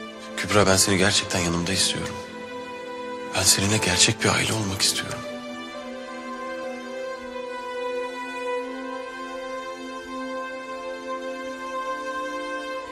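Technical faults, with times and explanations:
4.13–4.20 s, one channel drops out: For about 70 ms the sound abruptly falls by about 6 dB and then returns to its previous level. The likely cause is one side of a stereo feed briefly going silent before the two channels are summed to mono. Content shared by both sides then arrives from only one, so it halves in amplitude, and anything carried only on the missing side vanishes for that moment.
6.64 s, overlap between stream segments: Two consecutive stream segments carried time stamps that overlapped. The player discarded the overlapping stretch as if it were duplicated, but that audio was not actually repeated, so about 15 ms of genuine sound were lost. The waveform jumps from one point to a later one with no transition, which is heard as a short click or tiny skip. The spacing fits segments about 6 s long.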